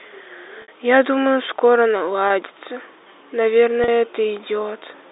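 Packet loss with pitch repetition interrupts this speech three times: at 0.62 to 0.68 s (a 60 ms gap), at 2.28 to 2.30 s (20 ms) and at 3.84 to 3.88 s (40 ms), which fits 20 ms packets. At each gap, the receiver fills the missing audio by looping the last pitch cycle it received, so the voice briefly holds with a slightly buzzy, frozen quality before normal speech resumes. The speech comes over a G.711 telephone line limited to about 300 Hz to 3.7 kHz.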